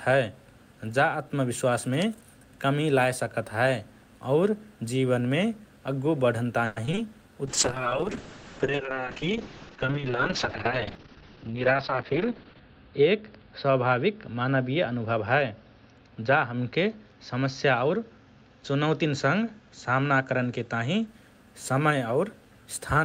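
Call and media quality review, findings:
Repeated packet loss (robotic sound), 6.65–6.99 s: four holes, longest 110 ms, half the span concealed by stretching prior sound. The result is choppy with dropouts, unlike the steady dulling of a bitrate drop.

Call bitrate drop, 7.47–21.13 s: encoder rate fell from 32 to 6 kbps, bandwidth from 20 kHz to 6 kHz, lowest for 5.19 s. Continuous muffled, watery sound with no gaps.

Jitter buffer speed-up, 11.03–11.55 s (110%, around 50 ms removed) and 17.33–18.19 s (107%, around 70 ms): pitch-period cuts to drain an overfull buffer. The sound is hurried at unchanged pitch, unlike resampling.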